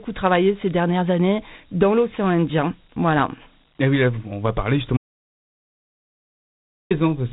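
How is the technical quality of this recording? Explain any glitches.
The technical quality is poor: the whole recording carries plainly audible codec grit, and a long section of the speech is missing.

Dialogic VOX ADPCM, throughout: 4-bit adaptive coding, consistent with a 32 kbps telephony stream, leaves plainly audible gritty hiss trailing the speech and nothing above 3.9 kHz.

Audio dropout to silence, 4.97 to 6.91 s: right after "oui on va parler", the sound cuts to silence for about 1.93 s, likely from a lost input while recording continued.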